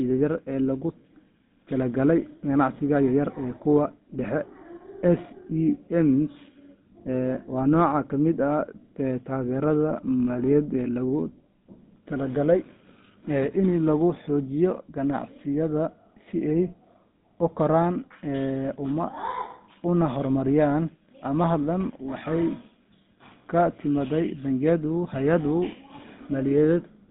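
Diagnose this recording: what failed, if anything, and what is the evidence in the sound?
Codec stage: GSM full-rate coding, fitting a 13 kbps stream, throughout; the pulse-driven excitation gives speech a buzzy, gravelly roughness, band-limited to about 150 Hz–3.7 kHz.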